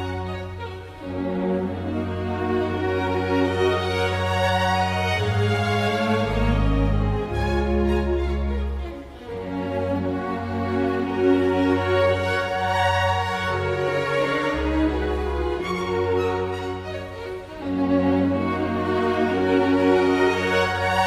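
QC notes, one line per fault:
0.0–2.0 s, adaptive stream starting at a low bitrate. Playback opens on a lean version to start fast. Treble is synthetic, nothing above 14.9 kHz, artefacts strong, which fits HE-AAC at 24 kbit/s. At 2.0 s it jumps, gaplessly, to what fits AAC-LC at 96 kbit/s.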